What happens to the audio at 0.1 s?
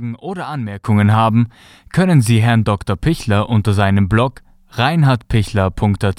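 Nothing goes wrong at 0.1 s; the speech there plays through intact, with no dropout, click or other fault.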